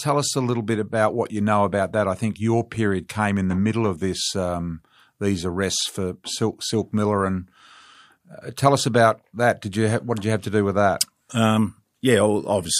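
The speech recording shows no audible technical fault at any point, with the signal level, continuity and bandwidth holding steady throughout.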